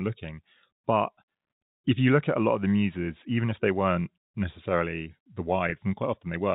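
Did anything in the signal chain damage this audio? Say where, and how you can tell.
Yes, packet loss with pitch repetition at 5.70 to 5.72 s, in the network stage ahead of the G.711 telephone decoder, whose 4 kHz band limit carries through. For about 20 ms the speech briefly holds on a slightly buzzy, sustained tone instead of moving on, which fits one lost packet. The receiver bridged the gap by repeating the last pitch period of the received sound, and because the gap was so short, the speech continues without falling silent.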